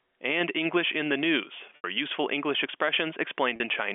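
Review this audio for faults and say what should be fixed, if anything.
Two dropouts show packet loss with pitch repetition. The first runs from 1.76 to 1.84 s, about 80 ms. The second runs from 3.56 to 3.60 s, about 40 ms. In each gap, the receiver loops the last pitch cycle to cover the missing audio. The shorter gap sounds like a brief buzzy hold. The longer one decays toward silence before the speech cross-fades back. Gap lengths fit losses of four and two 20 ms packets. The G.711 telephone band plays through normally around them. A larger jitter buffer with forward error correction would prevent these gaps.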